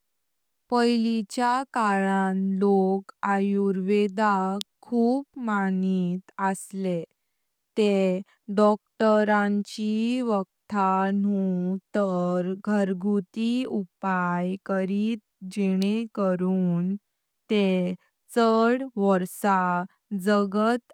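At 4.61 s, just before "खूप मानित", a sharp snap cuts across the speech. A second, quieter snap lands at 15.82 s, before "करून ते शाड". Both are electrical switching spikes, likely from a nearby switch arcing into the audio line.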